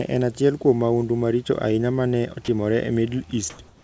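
At 2.45 to 2.48 s, the sender's voice detector likely mistook a quiet stretch of the speech for background and briefly stopped transmitting, so this is sound dropped by the voice detector. The receiver filled the 30 ms gap with synthetic noise, and about 20 ms of real speech is lost. It is heard as a tiny flat patch where the speech thins into steady hiss before the signal resumes.

Near the end, two pauses show comfort noise in place of the background. The sender likely switched to discontinuous transmission, and the receiver generated noise shaped roughly like the room. From 3.50 to 3.59 s the real room tone, about 28 dB below the loud parts, becomes a smooth, detail-free hiss about 3 dB louder. From 3.68 s to the end, a 161 ms stretch is filled the same way, this time about 3 dB quieter than the background it replaces, so the texture of the room noise drops out. Over the G.722 path, which leaves nothing above 8 kHz, both fills sound like featureless band-limited hiss.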